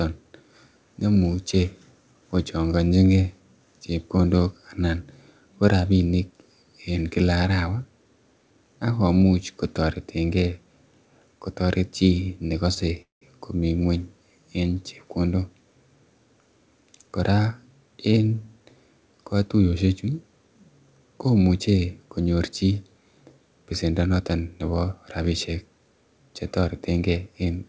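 At 12.74 to 12.78 s there is a short stall from a late packet. The next packet had not reached the receiver when it was due, so the jitter buffer ran dry and the decoder stretched the last bit of sound by about 21 ms until the data turned up. Playback then resumed from the same point, so nothing is lost. What you hear is a sound held a fraction too long, with a faint buzz or dip, and everything after it sits 21 ms later.

A quarter of a second later, from 13.02 to 13.23 s, comes a call audio freeze. The sound continues briefly as a fading buzz and then drops to silence for about 150 ms before picking up again exactly where it left off. In all, 194 ms of filler is inserted and nothing is dropped. The likely cause is a group of packets delayed in transit, which emptied the jitter buffer and forced the receiver to conceal the gap until they arrived. This adds another 194 ms of delay.

From 23.71 to 24.30 s, a jitter buffer speed-up plays the speech at about 113% of normal rate with the pitch unchanged. 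The buffer was holding more audio than its target, as happens when held-up packets arrive together. To cut that back, the receiver removed short slices of one or a few pitch periods in quick succession, about a tenth of a second in total. That stretch sounds hurried. The whole clip stays band-limited with nothing above 8 kHz, as the call codec path imposes.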